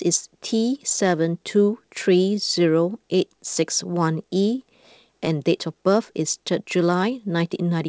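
A speech clip carried over a call path whose G.722-style coding leaves nothing above 8 kHz. It shows clock drift between sender and receiver: the sender's clock runs about 2% slow, so the jitter buffer keeps draining instead of holding steady. Small timing hiccups recur all through the clip, at uneven intervals. From 0.02 s to 7.64 s the receiver makes repeated timing corrections, stretching the audio to 98% speed by repeating short pieces and adding about 0.15 s overall. Each edit lengthens the sound, and they fall at uneven intervals, unlike the regular stutter of a looping buffer.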